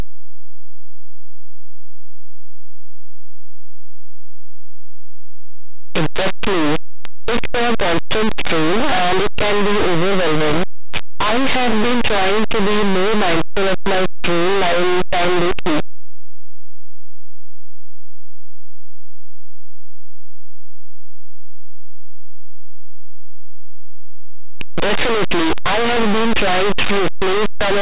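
From start to finish, the speech is buried in harsh, very loud distortion: linear audio read as companded. Samples stored as plain linear 8-bit values are being expanded as mu-law codes, so small values just to one side of zero turn into the loudest outputs while their mirror images stay small. Ordinary 8-bit grain sits far below the signal, whereas this fault grates very loudly.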